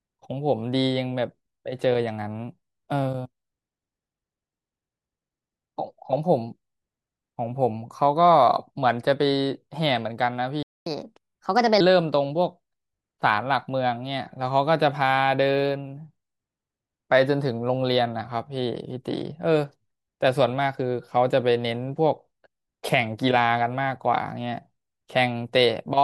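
At 10.63 s the speech cuts to silence for about 235 ms, resuming at 10.86 s. This playback stall is likely the player's buffer running dry or its output thread being blocked, leaving nothing to send until it recovered.

From 10.86 s to 11.80 s the player catches up at higher speed, resampling its backlog at 1.25 times normal rate. The speech runs noticeably faster and sits roughly four semitones higher, then drops back to normal speed and pitch once the lost time is recovered.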